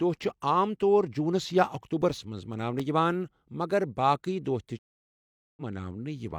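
Speech, with two distinct faults. Between 1.50 s and 3.31 s, after "عام طور جوٗنس" and before "مگر باقٕے دۄہ تہِ", there are eight CD scratch ticks, about four to five per second, none longer than a few milliseconds. That regular spacing points to a surface blemish passing under the laser once per disc revolution. Each pass corrupts more data than error correction can rebuild, so the player interpolates or mutes those samples, producing the brief clicks. After "مگر باقٕے دۄہ تہِ" a stream reconnect occurs from 4.79 s to 5.62 s. The audio drops to silence for 0.78 s as the connection fails and the player re-establishes it. Playback then resumes with a fresh decoder at a point roughly 150 ms later in the material, so a short stretch of the speech is skipped rather than delayed.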